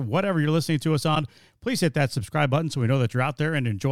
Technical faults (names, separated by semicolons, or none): corrupt frame decoded